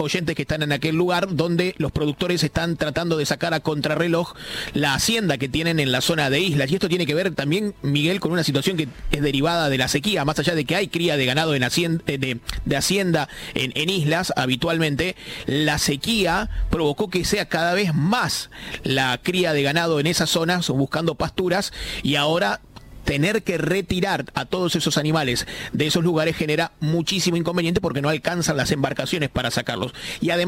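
Nothing goes wrong anywhere in the audio, so there's no technical fault to point out at any moment.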